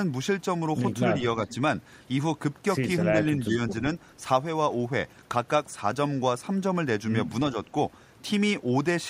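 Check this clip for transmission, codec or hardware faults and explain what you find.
No faults found.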